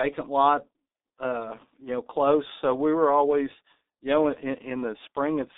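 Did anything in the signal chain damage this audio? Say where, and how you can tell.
Yes, at the codec stage: the G.723.1 codec damages the speech for the whole clip. The audio is confined to roughly 250 Hz to 3.7 kHz, with nothing above 3.8 kHz, and the damage is heavy, which fits a rate near 6 kbit/s. A simple telephone-band filter would only sound narrow and muffled. Here the speech is also hoarse and its consonants are smeared, because the codec rebuilds the voice from a coarse model updated once per 30 ms frame.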